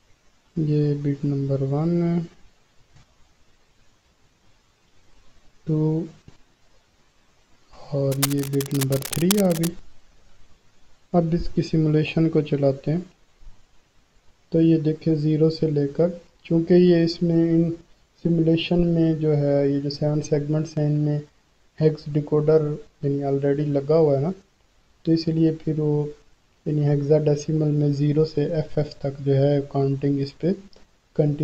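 A worn cable, connector or control was likely disturbed from 8.12 to 9.68 s, its contact resistance jumping about rapidly. The result is cable scratch noise: dense, uneven bursts of scratching and rustling laid over the sound, roughly 10 dB below it, for about a second and a half.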